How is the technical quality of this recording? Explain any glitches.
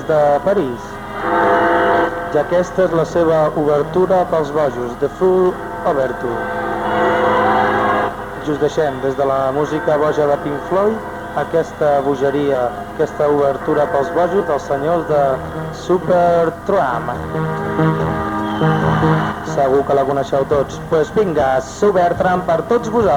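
Three glitches at 12.54, 14.40 and 18.08 s are compressed frames skipped. Whole blocks of coded audio, which fits 10 ms frames, never play, so the sound jumps ahead by roughly 100, 70 and 50 ms. Unlike a dropout there's no silent gap; the audio simply jumps ahead at each join.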